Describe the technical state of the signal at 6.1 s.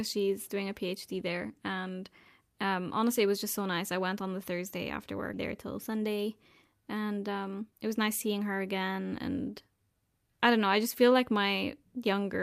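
The speech sounds hurried at unchanged pitch: a jitter buffer speed-up from 5.72 to 6.24 s, running about 8% fast as repeated pitch-period slices totalling roughly 50 ms are cut to shrink built-up delay.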